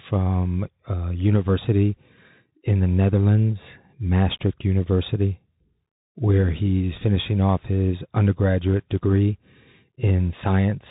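From start to finish the speech passes through a Bluetooth CVSD headset codec, whose one-bit delta coding at what sounds like a 64 kbps link cannot follow fast rises. Sibilants turn scratchy over a granular hiss, and a spectrogram shows everything cut off flat near 3.8 kHz.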